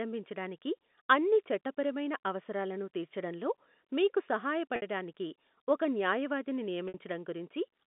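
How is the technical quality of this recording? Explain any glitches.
The recording has two brief glitches on a telephone-band line; the G.711 telephone coding passes sound between about 200 Hz and 3.6 kHz.

Packet loss with pitch repetition occurs at 4.76 s and 6.88 s, each gap about 60 ms long, which fits three lost 20 ms packets. The receiver bridges each gap by repeating the last pitch period and fading it out. The result is a short, buzzy held tone, not the abrupt silence or click of a plain dropout.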